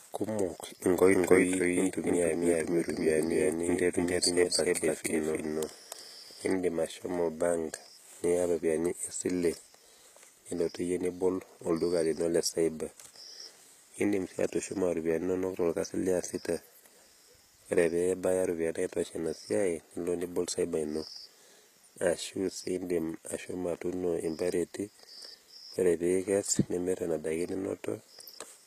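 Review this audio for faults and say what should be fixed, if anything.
HE-AAC compression, throughout the clip: the treble is plainly damaged, gritty and metallic, with s sounds turning lispy. This is likely HE-AAC at a low bitrate, around 20 kbps. The upper band is rebuilt by copying lower bands upward under a coarse envelope, so its harmonics don't line up with the real ones. Encode at a higher bitrate, or use plain AAC or an uncompressed source.

Doubled audio track, from 1.13 s to 6.53 s: a second full-band copy of the sound trails the original by about 300 ms at roughly the same level. It has no decay or room colour, and it starts and stops abruptly. This is likely a second capture path or a misaligned edit holding two copies. Route each source through a single path and check edits for overlapping duplicates.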